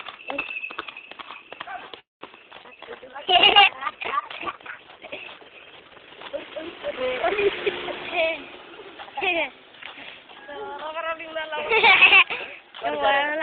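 At 1.99 s the sound stops moving forward: the last moment trails on briefly as a fading buzz and then drops to near silence for most of the pause, before picking up again at 2.24 s exactly where it left off. Nothing is lost, but about 0.22 s of gap has been inserted. This is a call audio freeze, most likely caused by packets stalling in transit so that the jitter buffer ran dry and the receiver had to improvise until they arrived.

From 2.57 s the audio turns coarse and muffled, with a rough, watery edge and the top end noticeably dulled. It stays that way until 10.04 s and is at its worst for roughly 3.6 s of that stretch. This is a call bitrate drop. The bandwidth estimate collapsed, and the encoder went from 48 kbps down to 11 kbps. At that rate Opus quantises heavily and trims off the high frequencies.

Inside that degraded stretch, two abrupt forward jumps land at 2.63 s and 2.70 s, with almost no gap at either. 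Something like a tenth of a second of material vanishes at the first and a bit less at the second, and the surrounding sound is spliced nearly end to end. These are skip ahead events: audio was discarded in transit or by an overfull jitter buffer while later audio was already queued.

Right after, the pace sags without any change in pitch. From 2.76 s to 3.25 s the audio runs at about 87% speed, and again from 3.70 s to 4.73 s at about 93%, with sounds drawn out. Each pass adds roughly 70 ms. This is jitter buffer slow-down: the receiver repeated individual pitch periods and bits of pauses to rebuild a depleted reserve.

Late in the clip the opposite happens. From 8.26 s to 10.04 s the audio hurries along at about 111% speed, pitch unchanged, and it sounds hurried. This is jitter buffer speed-up. With too much audio queued, the receiver kept cutting out short pieces of a pitch period or so, trimming away about a fifth of a second in total to bring the delay back down.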